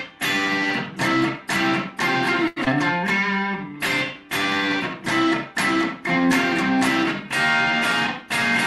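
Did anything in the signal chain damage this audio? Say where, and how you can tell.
Yes, all of it in the network and jitter buffer stage, packed into about two seconds. At 2.47 to 2.59 s there's a short stall from a late packet. A packet showed up late, the buffer ran dry, and the receiver stretched the last bit of sound for about 89 ms to cover the wait. You hear that as one sound hanging on too long with a faint buzz or dip, but nothing actually goes missing. Playout just falls 89 ms further behind.

Right after, at 2.64 to 2.69 s, comes a skip ahead. Audio was dropped, either on the way or by the buffer, and that catches up on the backlog. Around 70 ms is gone, with only about 19 ms of fill at the seam, so the two sides butt together almost directly. It sounds like a tiny jump forward, the opposite of the stall just before it, and it pulls the delay back down.

From 2.97 to 4.15 s there's a jitter buffer slow-down. 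The buffer is rebuilding its reserve by repeating single pitch periods and slivers of pauses, adding 72 ms over that stretch. Everything plays at about 94% speed with the pitch unchanged, so sounds feel a little drawn out. All of this rides on an Opus call path whose top end stops around 12 kHz.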